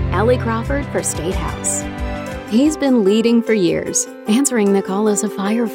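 The signal carries no dropouts, glitches, distortion or other technical faults at any point.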